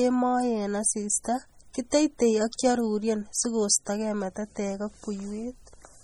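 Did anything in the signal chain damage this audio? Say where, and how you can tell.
Yes. The damage comes from the codec stage and runs through the whole speech clip. It is most likely MP3 compression, and heavy. The sound has a watery, swirling texture, sibilants come out metallic and chirpy, and attacks smear, which fits a very low bitrate of around 32 kbps. Too few bits reach the weak frequency lines, so they flicker on and off between frames. Content still reaches about 21.1 kHz, so bandwidth isn't the giveaway. Unlike network packet loss, nothing drops out or repeats.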